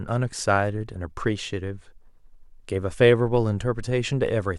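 No technical faults can be heard in this speech.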